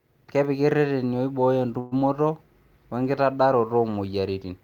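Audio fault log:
1.79–1.94 s, call audio freeze: after "ireteni oibooyo" the last sound stretches into a fading fill, likely from a starved jitter buffer. A smeared, featureless band appears on the spectrogram, and the speech resumes intact about 0.12 s late.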